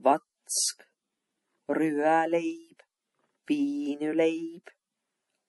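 MP3 compression damage runs through the whole clip, from start to finish, and is plainly audible. Nothing is left above 11.5 kHz, where the encoder has cut the treble to save bits, and the remaining speech has the watery, swirling quality of weak frequency lines being dropped and restored frame by frame. The depth of that damage points to a low bitrate, one that fits about 48 kbps, likely from MP3 encoding.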